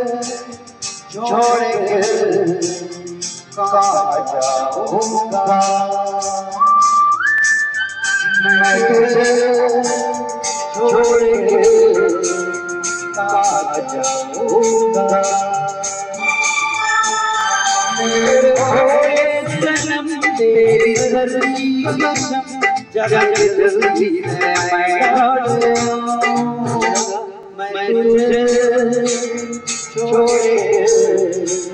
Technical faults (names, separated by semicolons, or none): overlapping chunks